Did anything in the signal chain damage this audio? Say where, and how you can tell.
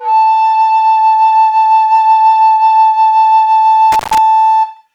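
Yes, there's an intermittent contact in the analogue wiring. Between 3.92 and 4.18 s the music crackles, then drops out for about 119 ms, leaving faint hiss. A loose plug or cable briefly opens the circuit, scratching at each break and remake.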